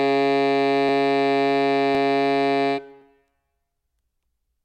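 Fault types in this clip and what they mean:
Clock drift buffer slips, 0.89 to 4.08 s: a click recurs in the music about every 1.06 s, four times in all, likely from two mismatched clocks drifting a few hundred parts per million apart until the buffer drops or repeats around fifteen samples.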